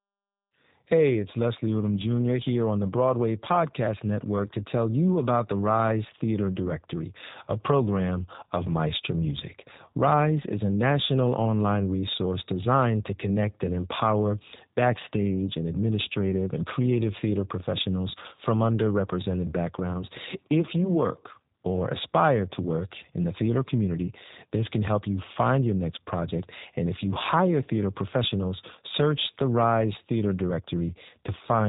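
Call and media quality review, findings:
G.729 codec damage across the whole clip. Speech band stops near 3.8 kHz. Rough, slightly synthetic timbre, plainly audible. Component: narrowband VoIP encoder. Mechanism: speech resynthesised from a vocal tract filter, pitch predictor and sparse pulses. Sound fits an 8 kbit/s codec.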